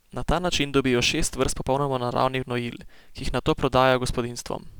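Sample clock jitter runs the whole way through: a wobbly converter clock of a few microseconds adds a gritty hiss roughly 30 dB down, thickest on loud, bright speech.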